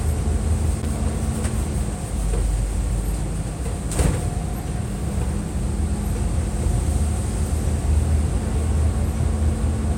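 From 0.80 to 0.86 s, loose connector crackle: a dirty contact chopping the signal, heard as scratchy bursts, visible as jagged waveform dropouts and broadband vertical spectrogram streaks.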